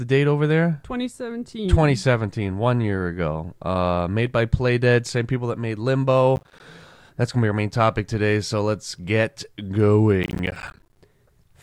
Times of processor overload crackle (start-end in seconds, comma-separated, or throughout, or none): 6.36-6.60, 10.23-11.01